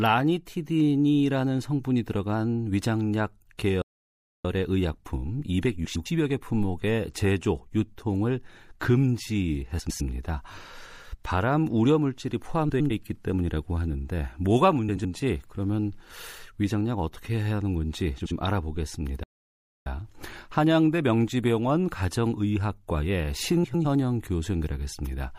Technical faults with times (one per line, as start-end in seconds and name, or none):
0.00-25.38 MP3 compression
3.82-4.45 playback stall
5.84-6.06 frames out of order
9.79-10.01 frames out of order
12.69-12.91 frames out of order
14.89-15.05 frames out of order
18.20-18.31 frames out of order
19.23-19.86 playback stall
23.63-23.85 frames out of order